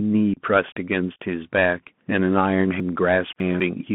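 Throughout, the speech carries the Bluetooth CVSD headset codec: a narrow 150 Hz to 3.4 kHz band with a granular hiss and scratchy, overloaded s sounds. The delta modulator's step can't keep pace with fast high-frequency movement. That hiss and slope distortion set it apart from plain telephone band-limiting, and the sound fits a 64 kbps CVSD link.

From 0.34 to 0.39 s comes unconcealed Bluetooth headset packet loss. About 30 ms of audio, likely a handful of short voice packets, simply vanishes, leaving abrupt holes and a brief dip in level as the speech returns. Unlike a smoothed or concealed dropout, nothing fills the gap.

From 2.8 to 3.6 s, chunks out of order scramble the speech. A 200 ms chunk arrives three chunks late and plays after material that should follow it, leaving hard joins and a jumbled passage. Unlike the packet loss, no audio is missing; it is only misplaced.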